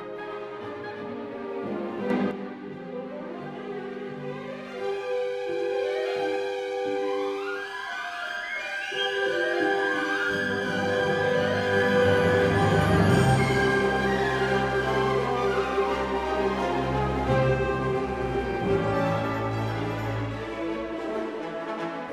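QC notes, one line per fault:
2.10–2.31 s, sudden gain jump: the level leaps up by about 6 dB at once, with the background noise rising together with the sound, then drops back. This is likely a digital gain change applied between adjacent samples with no ramp to smooth it.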